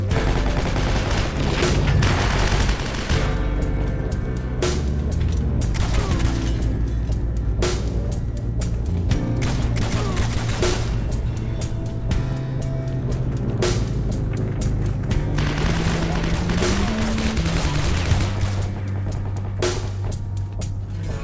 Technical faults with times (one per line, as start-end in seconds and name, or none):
none